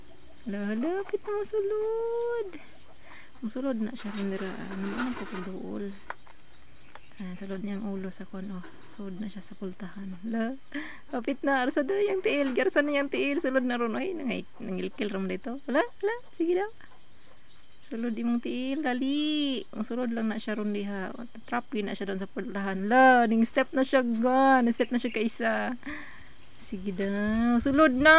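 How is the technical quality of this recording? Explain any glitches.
No glitches or technical faults can be heard here.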